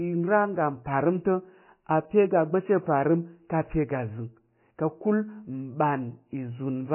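Throughout the speech, the treble is missing entirely, with nothing above 3 kHz, and the sound has a heavy watery, swirling texture with smeared consonant attacks. This is likely MP3 compression at a very low bitrate, around 16 kbps, where the encoder cuts high frequencies and drops weak spectral detail frame by frame.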